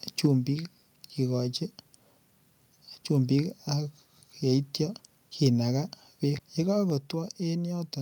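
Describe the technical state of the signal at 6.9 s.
At 6.9 s speech and background drop together by about 4 dB in one abrupt step rather than a ramp: microphone volume stepped down, likely by software cutting input gain.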